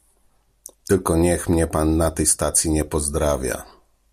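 A speech recording, with nothing technically wrong with it.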